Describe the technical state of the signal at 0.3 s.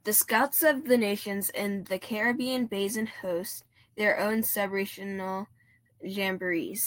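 At 0.3 s the speech signal is intact, with no audible dropout, distortion or other technical fault at that moment.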